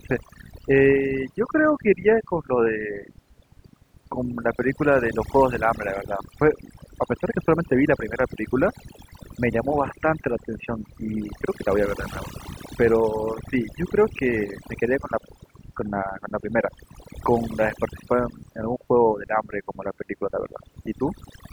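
From start to finish this speech has overdone noise removal: the denoiser was pushed too hard, so it kills any frequency band sitting near its noise estimate. The quieter parts of the voice go too, leaving the speech over near-silence sprinkled with twinkly specks.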